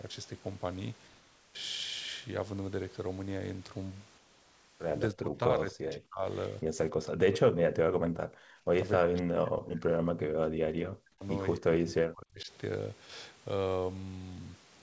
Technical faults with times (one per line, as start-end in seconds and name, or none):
1.08-1.54 comfort noise in place of the background
4.18-4.80 comfort noise in place of the background
5.12-6.25 speech suppressed in double talk
6.64-6.75 speech suppressed in double talk
7.26-8.27 speech suppressed in double talk
8.55-8.67 background gated by the echo canceller
8.97-11.24 speech suppressed in double talk
11.58-12.50 speech suppressed in double talk